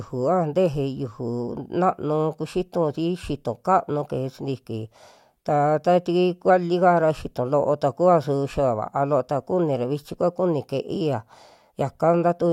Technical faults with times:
none

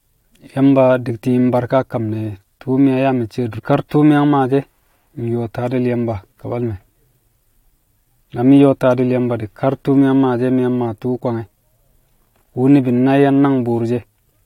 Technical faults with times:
3.58-3.60 stream segment skipped

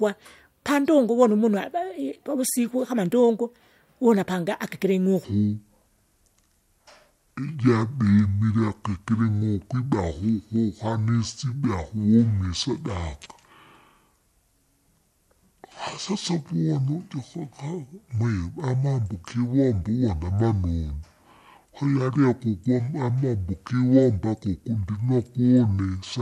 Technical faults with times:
5.24-26.22 section at the wrong speed

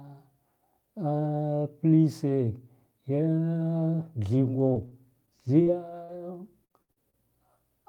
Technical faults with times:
4.33-5.68 repeated packet loss (robotic sound)
6.04-6.10 short concealed packet loss
6.08-6.14 lost packet rebuilt from error correction
6.64-7.15 repeated packet loss (robotic sound)

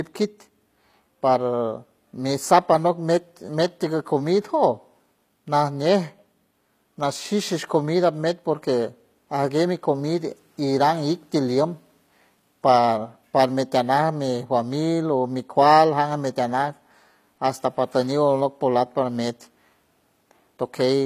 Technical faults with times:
0.00-21.05 HE-AAC compression

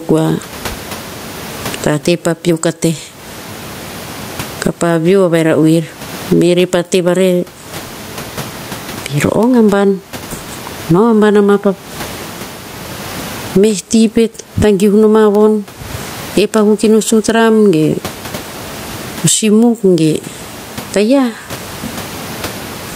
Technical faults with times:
0.00-22.95 gain pumping

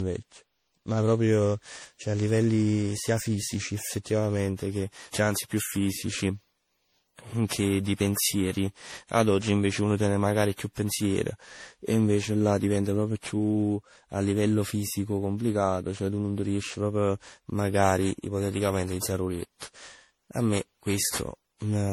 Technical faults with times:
0.00-21.92 generation loss

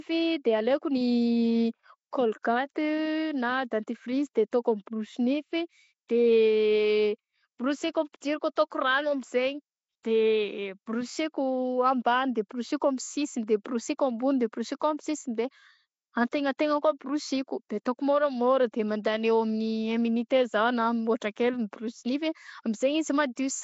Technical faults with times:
0.00-23.64 Nellymoser compression

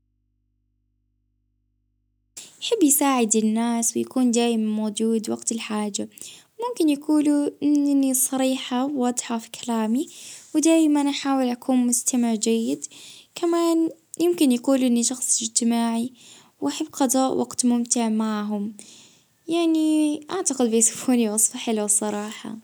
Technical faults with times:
0.00-2.37 audio dropout to a faint residue

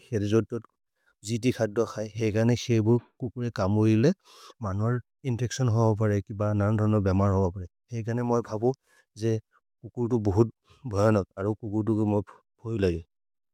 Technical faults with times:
none

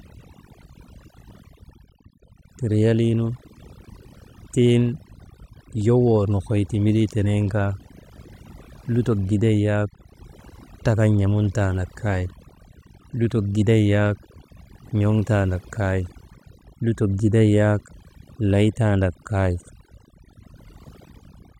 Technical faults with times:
0.00-21.59 overdone noise removal

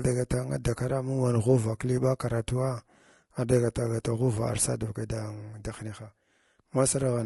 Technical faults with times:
0.00-7.25 low-delay AAC compression

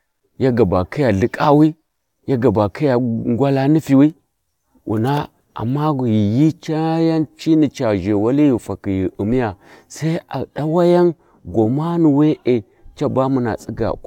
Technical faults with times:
none

